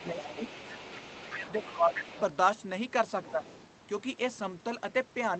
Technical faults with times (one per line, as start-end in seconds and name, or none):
0.00-2.21 other side's voice leaking through
0.11-2.11 speech suppressed in double talk
3.24-3.66 other side's voice leaking through
3.31-3.45 speech suppressed in double talk